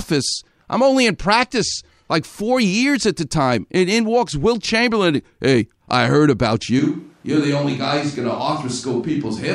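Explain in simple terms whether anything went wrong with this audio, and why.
Something does go wrong at 6.79 s, and it lasts to the end: a switch to a distant microphone. The speech suddenly sounds roomy and hollow, loses its warmth, gets a bit quieter, and more room noise shows through. This likely happened because the close microphone dropped out and a farther one took over. Unlike a simple volume dip, the tone and sense of space change too, and unlike added echo, the change is an instant jump.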